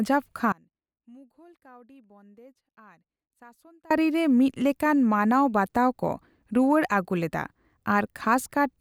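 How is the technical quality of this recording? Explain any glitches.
The recording has one glitch: an audio dropout to a faint residue from 0.52 s to 3.91 s, roughly 3.4 s of lost speech. The wanted signal stops abruptly and returns just as suddenly, and the gap still holds a faint leak of the sound around 30 dB below normal level rather than true silence. The likely cause is a break in the signal feed while the path downstream stayed live, so only a weak residue got through. It sounds like a cut, not a pause or fade.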